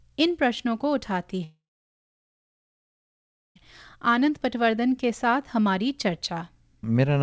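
From 1.44 to 3.58 s the speech breaks off into a brief fading buzz, then about 2 s of silence. That points to a likely long network dropout, far longer than a short concealed packet loss.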